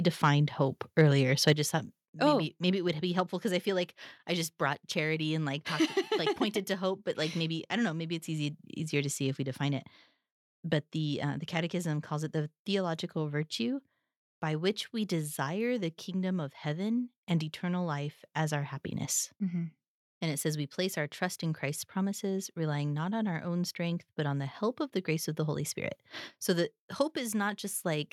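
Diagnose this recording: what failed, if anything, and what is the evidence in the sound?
Right at the start there's microphone overload, three short bursts of harsh crackle at 0.24–0.27 s, 0.98–1.02 s and 1.47–1.50 s, the last one just before "I just thought". The cause is likely at the converter stage: the input gain was set hot enough that the loudest peaks ran about 1 to 2 dB past full scale. Their tops get flattened, and that squared-off waveform is where the gritty edge on those syllables comes from. Only a small slice of samples is affected each time.

Then at 1.53 s, right before "just thought", the microphone volume steps down. The whole signal, voice and background together, drops by about 4 dB in one go. That's likely the call processing reacting to the clipping just before it and pulling the device's input gain back a notch. It's a single step rather than a smooth fade, so you hear the level sink abruptly.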